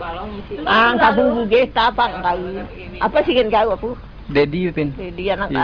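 Nothing in the signal points to a technical fault anywhere in the audio.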